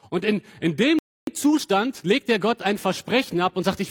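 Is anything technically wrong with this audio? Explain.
Yes. At 0.99 s a playback stall silences the audio for about 0.29 s, likely because the player ran short of data or was blocked. It resumes at 1.27 s.

From 1.27 s to 2.41 s comes time-compressed catch-up. The player cuts and cross-fades small slices to clear its backlog. The sound runs 1.25 times fast, at normal pitch.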